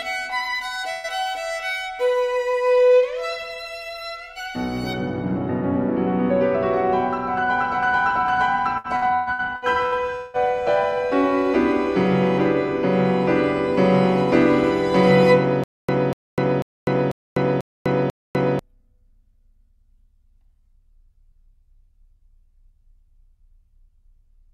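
A short stretch of audio drops out and is replaced by a continuation of the preceding sound that fades as it goes, from 0.91 to 1.07 s. This is a burst of packet loss: packets were lost or arrived too late, so the receiver extended the last sound for about 123 ms and lowered its level, and when playback resumed, about 120 ms of the original audio had been skipped. From 8.78 to 10.37 s the sound becomes choppy, with seven separate holes, the longest 177 ms, patched one after another. This is repeated packet loss (robotic sound). Each missing packet is covered by stretching the last sound, and the next hole follows soon after. About 600 ms of audio is lost and concealment fills roughly 38 percent of that stretch, which gives the broken, pieced-together texture. From 15.64 to 18.59 s the same fragment of about 243 ms plays again and again, six times, each followed by about 250 ms of silence, so a burst returns every 493 ms at an even pace. 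This is a stutter with silent gaps, likely from a player or stream that stalled and, at each retry, replayed its last buffered fragment before running empty, while the audio due in that time was lost.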